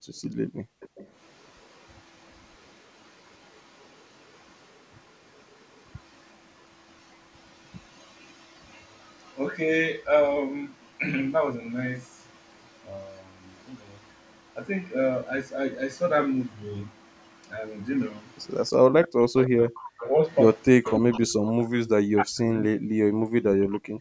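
Speech recorded through a call's microphone chain (nothing above 8 kHz, consistent with normal call processing) carries three echo-canceller faults. From 0.00 to 0.89 s the background is gated by the echo canceller: for roughly 0.7 s in total the room tone is pulled down, at its deepest by about 40 dB, while the far end's loudspeaker plays, then comes back. Unlike a dropout or packet loss, only the ambience dips and the signal itself never breaks. An echo leak, likely from one side's loudspeaker reaching its microphone and not being fully removed by its canceller, returns a copy of the speech 320 ms late at 0.31–4.48 s, 6.05–9.38 s, 12.28–14.15 s, 18.31–18.37 s, 19.38–21.19 s and 23.72–23.79 s. It sits about 30 to 40 dB below the speech early on and rises to about 15 to 20 dB below after 19 s. The fixed 320 ms lag and the repeated copy separate it from room reverberation, which smears continuously and doesn't repeat as a distinct delayed copy. 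From 18.81 s to the end, the speech is suppressed in double talk: both sides talk at once, and the canceller likely mistakes the near talker for echo and ducks it. This produces dips of up to about 40 dB across roughly 3 s in total. The suppression follows the overlap with the other talker, whereas the early gating affects only the background.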